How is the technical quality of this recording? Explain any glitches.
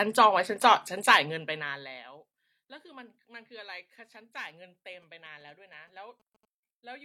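The recording is marred by one interference fault. GSM signalling bursts occur from 4.93 to 6.45 s. A nearby 2G phone was exchanging short radio bursts with the network. The audio circuit rectified them. The result is a galloping dit-dit-dit of 217 Hz buzzes, about 20 dB below the speech.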